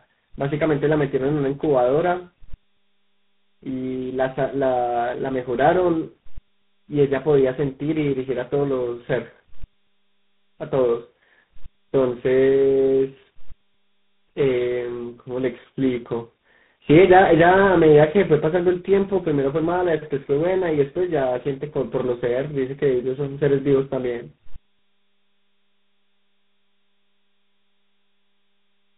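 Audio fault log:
throughout, tandem speech coding: the call was passed through three speech codecs in a row, decoded back to plain telephone audio and re-encoded at each link. The chain sounds like G.726 at 24 kbit/s, then GSM full rate, then G.726 again, joined by A-law links. Each coder compounds the previous one's errors, so the speech comes out rough, muffled and warbly, with nothing above about 3.9 kHz.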